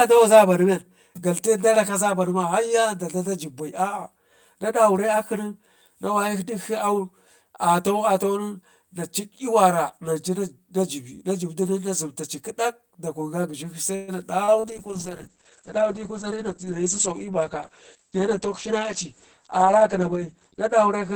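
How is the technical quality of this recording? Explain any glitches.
Not great: the whole thing sounds hollow, and there's a cluster of network trouble from about 14 s onward.

The channel delay (comb filtering) runs throughout. One channel lags the other by roughly 10 ms, so the mono sum cancels at evenly spaced frequencies, starting around 50 Hz. That gives the speech a phasey, hollow colour.

At 13.95 s there's a call audio freeze, likely from packets held up in transit. The last sound is stretched into a fading buzz for about 124 ms, then the speech resumes where it stopped, slightly later than it should.

Short concealed packet loss follows at 14.44 and 14.60 s. Each time about 40 ms never arrived and was patched over by extending the previous sound, so you hear brief smears.

Right after, at 14.70 s, a call bitrate drop takes it from 48 to 9 kbps until the end. The audio bandwidth shrinks from 20 kHz to 8 kHz, so the speech turns muffled and rough.

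From 16.0 to 17.7 s there's a jitter buffer speed-up. The receiver trims small pitch-period chunks, about 150 ms in total, to shed delay. The speech runs about 7% fast at the same pitch and sounds a bit hurried.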